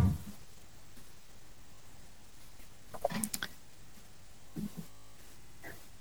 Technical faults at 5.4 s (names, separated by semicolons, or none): drift correction step